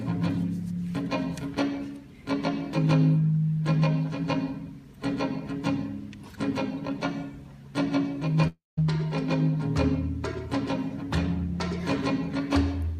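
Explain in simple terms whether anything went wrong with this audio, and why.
At 8.47 s the sound breaks off into a fading buzz, then about 0.18 s of near-silence, before resuming at 8.79 s with about 0.3 s gone. This is a long network dropout: data likely stopped arriving, and the receiver stretched the last sound to cover the gap.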